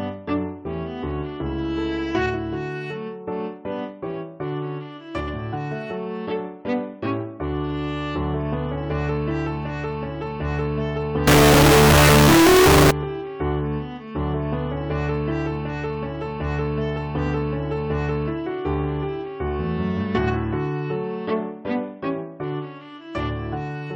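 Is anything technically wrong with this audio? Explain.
Yes. From 11.27 to 12.91 s the sound turns into a float read as integer fault, most likely 32-bit float samples interpreted as 32-bit integers. The sign and exponent bits set the values, so the waveform becomes a near-square block at an almost fixed, high level, extremely loud and harsh, with background noise raised to as loud as the speech, and the spectrogram fills with dense broadband energy.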